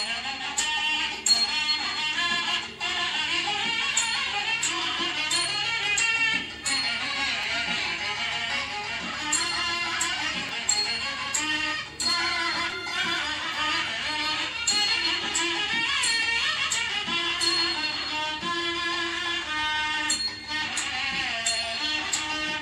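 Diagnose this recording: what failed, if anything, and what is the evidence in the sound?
Repeated buffer at 1.37 s, 7.43 s and 12.71 s, a driver or buffer stage failure. A 5.33 ms slice, which fits a 256-sample buffer, plays twice at the first two times and three times at the last. Each gives a brief click-like stutter with hard joins and drops a few milliseconds of new sound.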